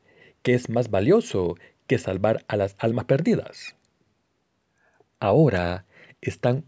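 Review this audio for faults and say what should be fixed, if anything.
Nothing here needs fixing, as no faults can be heard in the speech. It has passed through call microphone processing, so the lowest bass is trimmed and nothing sits above 8 kHz, which is expected for that path.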